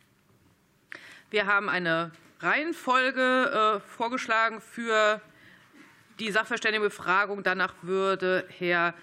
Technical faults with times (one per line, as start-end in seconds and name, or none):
none